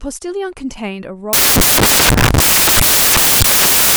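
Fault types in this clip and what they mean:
Samples built from the wrong bytes: from about 1.33 s to the end, the reader is stitching each sample together out of misaligned or swapped bytes, so the jittery low-order bits land on top and the speech turns into loud, harsh broadband noise, close to white on the louder sounds.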